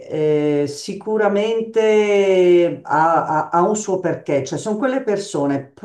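Nothing in this bit of speech stands out as a technical fault, so there's nothing here to flag.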